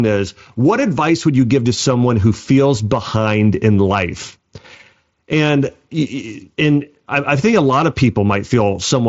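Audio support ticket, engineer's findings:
Engineer's findings: no fault found; the speech comes through the Bluetooth mSBC headset path as expected, with nothing above about 7.7 kHz.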